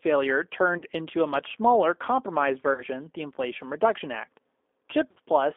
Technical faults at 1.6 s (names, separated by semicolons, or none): G.729 codec